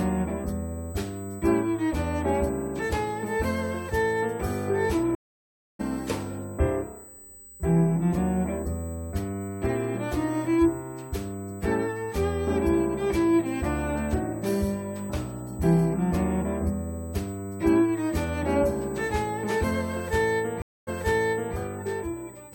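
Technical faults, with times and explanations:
Throughout: USB whine. A steady 8 kHz tone sits about 25 dB below the sound. The bus's 125-microsecond microframes are leaking in through power or ground.
5.15–5.81 s: stream reconnect. The connection dropped for 0.64 s. Playback resumed roughly half a second further on, so that stretch is skipped.
20.62–21.55 s: stream reconnect. A 0.25 s silence follows a break. The fresh decoder restarts 0.68 s earlier, because the server resent buffered audio, so a section repeats.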